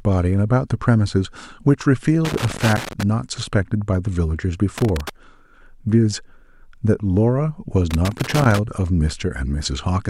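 Loose connector crackle hits the speech three times: from 2.25 to 3.03 s, from 4.78 to 5.10 s, and from 7.91 to 8.59 s. Each burst is an irregular scratching crackle lasting between about a third of a second and nearly 0.8 s. A worn or dirty contact in the signal chain is repeatedly making and breaking as it shifts, chopping the signal into fragments, with pops where any DC on the line jumps.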